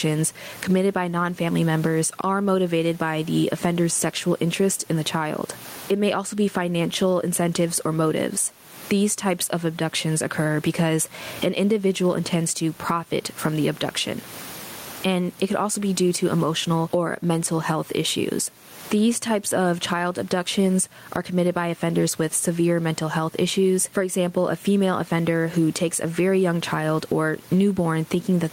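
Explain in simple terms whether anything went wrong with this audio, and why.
Throughout the recording, loud and soft parts end up closer in level, so the speech sounds flattened. This is gain pumping, likely from the microphone level being set far too high, so an automatic limiter keeps pulling it down hard on loud moments and letting it back up in the quiet gaps. The room noise itself is normal.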